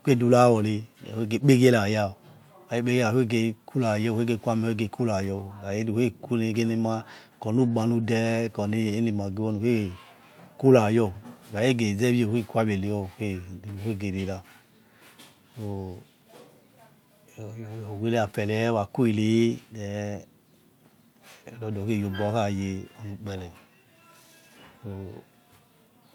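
A recording of speech, with no technical faults to be heard anywhere in it. Nothing in the signal calls for a time, a value or a cause.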